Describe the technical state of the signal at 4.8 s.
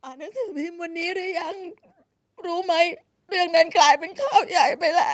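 At 4.8 s the speech comes through intact, with nothing above about 8 kHz as expected from a call path, and no fault can be heard at that moment.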